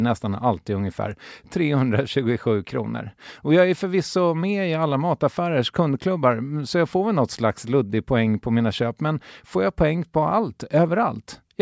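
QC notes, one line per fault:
No faults found in this clip.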